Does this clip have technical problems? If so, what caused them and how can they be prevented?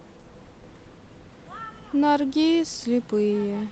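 No, no technical faults here.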